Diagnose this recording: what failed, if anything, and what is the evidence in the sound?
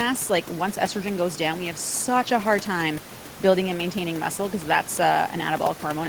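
Nothing failed in this recording.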